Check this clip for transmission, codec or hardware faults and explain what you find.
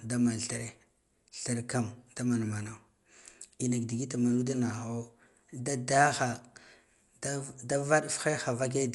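The speech carries Dolby Digital compression damage throughout, plainly audible. Nothing is present above 11.4 kHz, giving a dull top end, with rough, fluttering noise around voiced tones. This is likely a starved AC-3 encoder, consistent with about 64 kbps, narrowing bandwidth and replacing unfunded frequency lines with dither noise.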